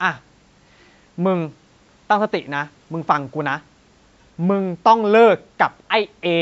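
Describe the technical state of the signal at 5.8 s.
At 5.8 s the speech signal is intact, with no dropout, distortion or other fault, just the ordinary sound of call microphone processing, which takes out the lowest bass.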